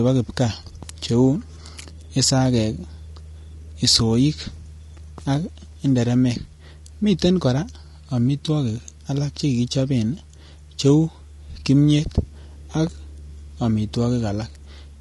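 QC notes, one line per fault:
Throughout: low-delay AAC compression, plainly audible and likely AAC-ELD at around 32 kbps. The speech comes across rough and grainy, with noise creeping in between the harmonics. Short frames resolve pitch poorly at this rate, so detail smears and the top sounds thin and synthetic.
8.45 s and 11.59 s: AAC frame loss with concealment, each a single 20 ms dropout. The decoder patched the gap from the previous good spectrum, so you hear a brief smeared, noisy or phasey blip rather than silence, since neither loss lasted long enough to fade out.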